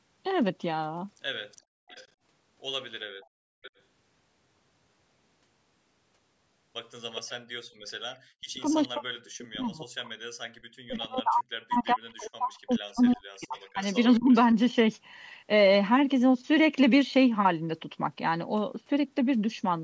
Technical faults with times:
1.57-2.07 echo leak
3.62-3.71 echo leak
7.15-7.31 echo leak
8.38-14.32 speech suppressed in double talk
9.41-9.67 echo leak
12.23-14.36 echo leak

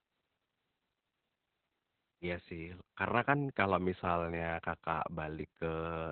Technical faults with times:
0.00-6.11 Opus voice compression

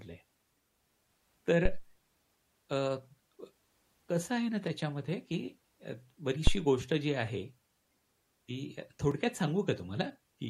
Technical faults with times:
4.67 block of digital silence
6.47-6.60 phantom power thump
7.27 block of digital silence
9.11 block of digital silence

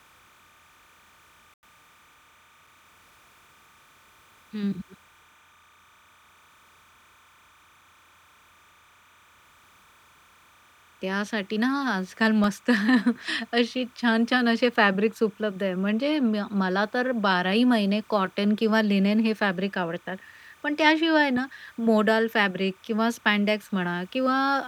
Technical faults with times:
0.00-24.67 timecode bleed
1.54-1.63 Bluetooth stall
12.44 block of digital silence

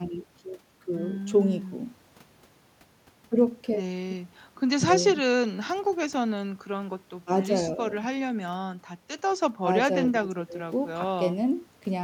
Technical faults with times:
none

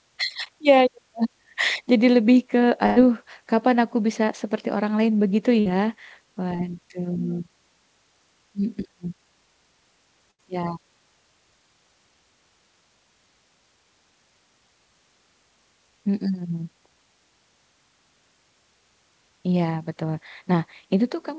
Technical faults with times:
2.86-2.98 burst of packet loss
5.60-5.67 burst of packet loss
6.55-6.61 short concealed packet loss
10.31-10.40 burst of packet loss

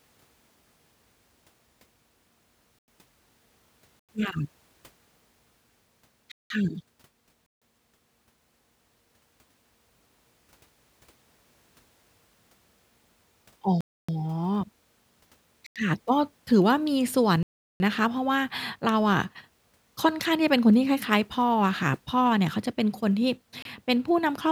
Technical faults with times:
2.79-2.88 block of digital silence
3.99-4.09 block of digital silence
6.32-6.50 block of digital silence
7.46-7.62 block of digital silence
13.81-14.09 block of digital silence
15.66-15.76 block of digital silence
17.43-17.80 block of digital silence
23.62-23.65 block of digital silence

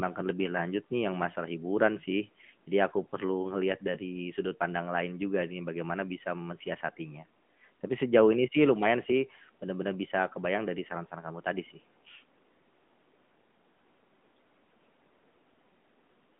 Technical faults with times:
0.00-16.39 AMR narrowband mobile codec

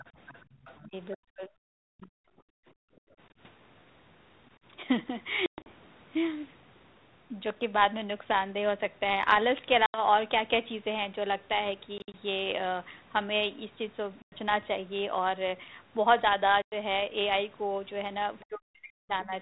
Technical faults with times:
0.00-1.16 other side's voice leaking through
0.44-0.55 background gated by the echo canceller
0.83-2.17 speech suppressed in double talk
2.45-3.18 background gated by the echo canceller
5.46-5.70 packet loss on an ADPCM call
9.86-10.02 packet loss on an ADPCM call
11.98-12.14 packet loss on an ADPCM call
14.22-14.32 packet loss on an ADPCM call
16.62-16.73 packet loss on an ADPCM call
18.40-18.45 other side's voice leaking through
18.45-19.32 speech suppressed in double talk

